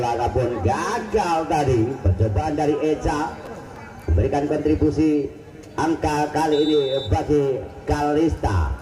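USB whine runs from 1.08 s to the end of the audio: a fixed 1 kHz tone, strongest at its 3 kHz harmonic and about 45 dB below the signal, leaking in from the bus's 1 ms frame activity through power or ground. Processor overload crackle appears from 3.46 to 3.76 s, a gritty tearing as several consecutive buffer deadlines are missed and short hard-edged fragments of old audio are replayed, which fits buffers of a few milliseconds.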